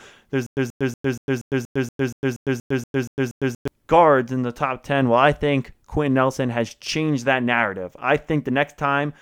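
From 0.46 to 3.68 s the stream likely stalled, replaying its last fragment on each retry before running empty. This stutter with silent gaps repeats one 132 ms burst 13 times, each followed by 105 ms of digital silence, and that stretch of speech is lost.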